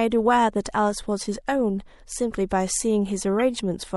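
A low-bitrate encode, likely MP3 compression at something like 64 kbps, has left this speech clip plainly damaged throughout: the encoder starved the treble and dropped weak frequency lines from frame to frame, so the sound turns watery and swirly, with smeared consonant attacks. Near the end, a corrupt frame was decoded anyway, its damaged data placing energy at wrong frequencies for roughly one frame, from 3.39 to 3.41 s, producing a brief glitch peaking around -20 dBFS.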